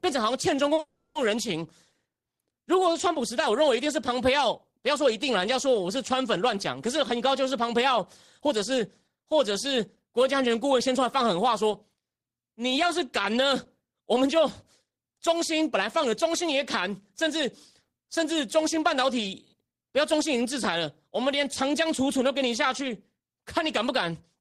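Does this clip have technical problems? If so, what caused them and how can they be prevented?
Yes. Between 0.75 and 0.79 s there is a short stall from a late packet: the receiver held the last speech sound for 30 ms until the packet arrived, then carried on from the same point. Because nothing is lost and the hold is this brief, it sounds like a slightly lengthened sound rather than a break. Prevention: a jitter buffer with a little more headroom absorbs a single late packet.

Running straight on from 0.79 to 1.16 s is a call audio freeze. The held sound continues as a fading buzz for 360 ms without ever going silent, and then the speech resumes where it stopped. This is far longer than the stall, and it most likely comes from packets being held up in the network. Prevention: prioritise voice traffic (QoS) and avoid congested links.

From 6.98 to 12.43 s there is a jitter buffer speed-up. 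The speech plays at 105% speed while keeping its normal pitch, as the receiver trims about 0.3 s of backlog in tiny pitch-period slices. A milder one follows from 14.82 to 16.60 s, at 103%, trimming only a few tens of milliseconds. The unchanged pitch is what separates this from a simple playback-rate error. Prevention: steadier packet delivery avoids the bursts that overfill the buffer.

Scattered short gaps run from 11.73 to 14.17 s. There are about five isolated lost packets, each patched by continuing the last sound, with roughly 50 ms concealed in total. Unlike the single stall, they are spread out and sound like brief ticks or smears. Prevention: forward error correction or redundancy in the codec covers isolated losses.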